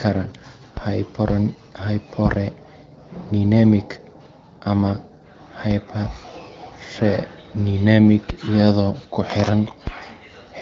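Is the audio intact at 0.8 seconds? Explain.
No. At 0.77 s the waveform's zero line jumps abruptly, a DC step of the kind caused by a converter recalibrating or an offset input being switched in. The offset then bleeds away at a rate that fits a high-pass filter around 20 Hz. You hear this as a single low thump or click, while the speech itself carries on unchanged. The band-limited HD Voice character of the AMR wideband coding is present through this moment too.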